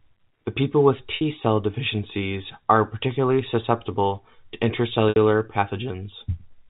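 At 1.16 s, a 50 ms gap just before "cell deficiencies are particularly" is bridged by packet loss with pitch repetition. The receiver, missing this stretch, loops the last pitch period and fades it, giving a brief buzzy hold on the sound. It recurs at 5.09 s, lasting 70 ms, right after "are particularly susceptible to". On a spectrogram, each shows identical, evenly spaced harmonics with frozen formants, and the waveform shows a repeating cycle tapering in amplitude. All of it sits within the 4 kHz ceiling of the telephone-band coding.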